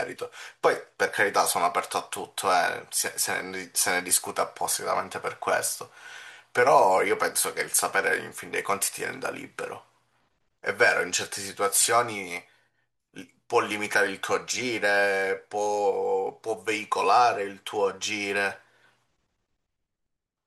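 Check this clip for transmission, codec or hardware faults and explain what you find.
Nothing faulty is audible anywhere in this speech recording.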